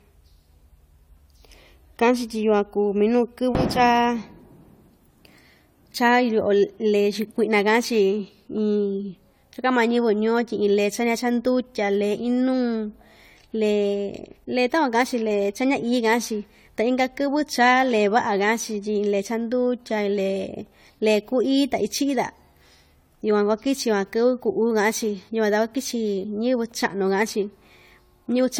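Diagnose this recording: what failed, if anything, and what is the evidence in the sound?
Throughout the speech, the sound is swirly, smeared and hollow, with blurred attacks: likely generation loss from repeated AAC-LC encoding at about 64 kbit/s, roughly four passes.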